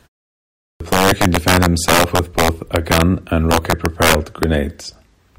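Integer overflow runs through the whole speech clip. The signal is driven about 5 dB past full scale, and instead of being limited, the loudest samples wrap around to the opposite sign. Only a small share of samples, around one percent, go over, but each one jumps across the entire range. The result is harsh, splintering cracks on the louder syllables, far sharper and more violent than ordinary clipping distortion would produce.

A clipped start after a pause follows at 0.65 s. The clip opens with 0.65 s of silence, long enough for the output device to go idle. When sound resumes, the first 0.15 s is swallowed while the device wakes and relocks, running to about 0.80 s. The phrase "player can defend himself" therefore begins abruptly out of nothing, missing its opening sound and lacking any natural onset.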